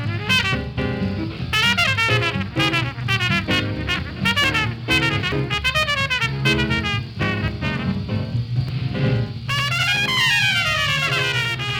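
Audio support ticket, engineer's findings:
Jumps forward in the sound at 3.44, 4.44, 5.32 and 7.48 s, roughly 40 ms skipped each (about 70 ms at 5.32). Likely dropped buffer (overrun), input not read before overwrite.

Slap-echo doubling from 8.69 s to end, late copy at equal level. Channel delay (doubling): one channel lags 92.9 ms, which fits a 4096-sample buffer, then is summed to mono.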